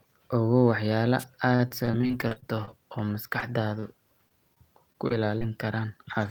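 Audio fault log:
1.19–1.24 s: wireless microphone noise hit, a brief burst of static as the FM radio link fades and receiver noise rises.
1.55–3.44 s: repeated packet loss (robotic sound), sixteen gaps patched by extending the previous sound, longest 40 ms, about 180 ms missing, giving choppy speech with pieces missing.
3.80–3.85 s: short stall from a late packet, the jitter buffer ran dry and the last sound was held 27 ms until the packet arrived, nothing lost.
4.29–5.43 s: repeated packet loss (robotic sound), five concealed gaps up to 26 ms, about 80 ms of speech missing, producing a shorter choppy patch.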